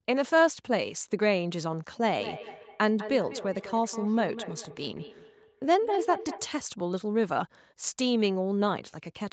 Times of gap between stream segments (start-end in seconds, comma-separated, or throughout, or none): none